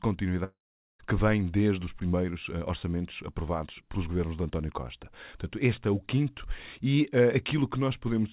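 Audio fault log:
0.44 to 1.01 s, long network dropout: About 0.56 s of the speech goes missing. The last sound before the gap is stretched into a short tail that quickly fades. Silence then holds for about 0.43 s. Speech resumes at 1.01 s with the lost part simply skipped. The likely cause is a run of packets that never reached the receiver, so its concealment could only extend old audio briefly before giving up. Everything here sounds capped at 4 kHz, which fits a narrowband G.711 call path.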